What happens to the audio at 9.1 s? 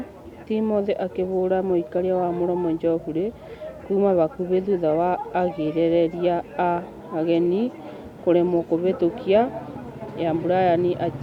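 At 9.1 s the speech carries on intact, with no dropout, click, distortion or other fault.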